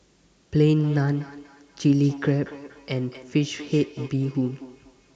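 From 0.59 s to the end of the clip, the speech carries a feedback echo between two devices. A second device in the same room is playing back this microphone's signal, and the microphone picks that playback up again. The local echo canceller only removes its own device's output, so the returning copy passes through. Each word comes back at a steady interval of roughly 200 ms, with the repeats peaking at about 17 dB below the direct speech.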